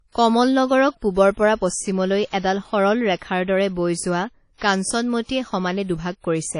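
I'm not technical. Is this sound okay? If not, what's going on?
No. Throughout the speech there is a watery, ringing quality, with a hiss that rises and falls with the voice, and nothing above about 10.1 kHz. That points to WMA compression as the likely cause. Unlike plain background noise, this hiss follows the voice.

There is also pre-echo at 2.29–2.33, 4.58–4.61 and 6.20–6.24 seconds: a brief hiss of roughly 35 to 38 ms just before a sharp sound, which softens that sound's start. An ordinary echo comes after a sound; this comes before it.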